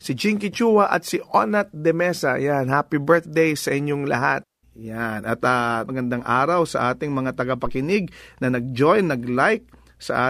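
Speech recording with a phantom power thump at 7.66 to 7.81 s. It is a deep, low-frequency thump peaking at about -19 dBFS and decaying in 33 ms. A supply switched on or off on the live input sent a voltage step through the coupling capacitors.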